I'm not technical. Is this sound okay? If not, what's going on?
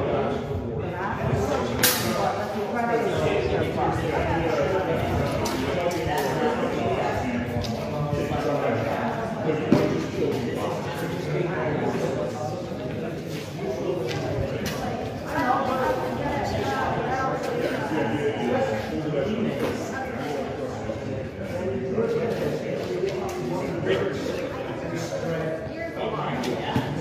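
Yes, this sound is okay, and there's nothing going wrong with it.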